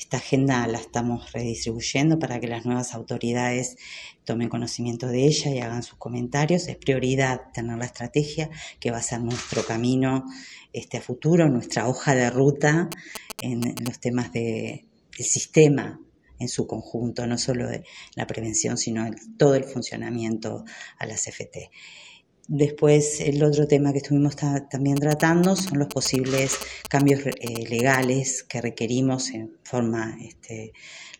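From 12.92 to 13.88 s, and again from 24.97 to 28.04 s, GSM signalling bursts break in: a galloping dit-dit-dit of short buzzes at 217 Hz, sitting only a few decibels below the wanted sound. A nearby 2G phone exchanging signalling traffic is transmitting its pulsed carrier in brief groups, and some part of the audio circuit rectifies that RF, turning the TDMA burst envelope into an audible buzz.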